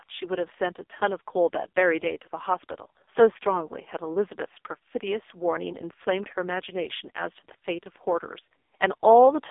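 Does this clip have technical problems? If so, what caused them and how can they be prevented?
Yes. The whole clip sounds buzzy and synthetic, thin and boxed in, with the speech confined to roughly 300 Hz to 3.6 kHz and nothing above 3.7 kHz. This is heavy AMR narrowband mobile codec damage. The voice is rebuilt from a coarse vocal-tract model using very few bits per frame, which fits AMR-NB's 5.15 kbps mode. To prevent it, record locally or send the call over a wideband, higher-bitrate link rather than a narrowband mobile channel.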